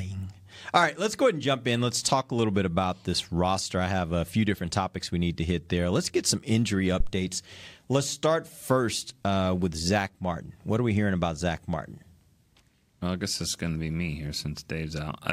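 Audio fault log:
7.00–7.12 s, phantom power thump: supply switching at the live input pushes a step through coupling capacitors, giving a deep thump peaking about -13 dBFS, decaying within 26 ms.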